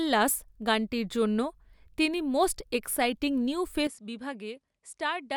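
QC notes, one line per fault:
3.87 s to the end, input switched to a poorer device: Right after "এক্সাইটিং নিউ" the sound turns duller and drops by roughly 10 dB. There is no gap at the change. Above 11.4 kHz there is nothing from this point on, so the top end is gone and the speech loses its air. A new, faint noise floor appears, well below the speech. The sudden shift in tone, level and noise likely comes from the recording moving to a different, lower-quality microphone.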